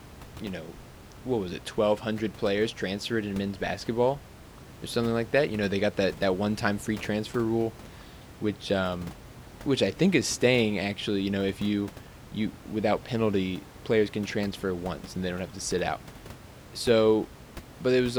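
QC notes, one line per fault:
No faults found.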